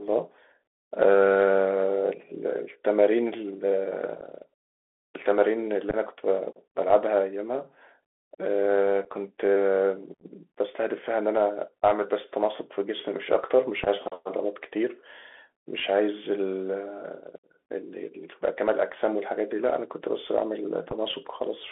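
The whole clip passes through a Bluetooth CVSD headset codec, the narrowband link that encodes each sample as a single up-or-down bit. Its adaptive step can't keep pace with fast, loud high-frequency movement, so sibilants come out scratchy and a granular hiss sits beneath the speech. The band is confined to roughly 300 Hz to 3.5 kHz, which fits a 64 kbps CVSD channel, and the damage is plainly audible.

On top of that, unconcealed Bluetooth headset packet loss drops short runs of voice packets. Nothing fills the gaps, so each becomes an abrupt hole that can click at its edges and is followed by a briefly quieter return. Single holes occur at 4.21 s (about 11 ms) and 9.05 s (about 7.5 ms). Scattered clusters that sound chopped and crackly occur at 5.90–5.96 s, 10.14–10.24 s (45 ms lost, the roughest), 13.84–13.88 s and 20.90–20.93 s.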